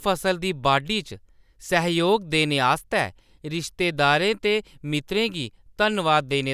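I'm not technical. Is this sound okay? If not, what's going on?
Yes, it sounds fine: nothing in this recording stands out as going wrong, so there's nothing to worry about.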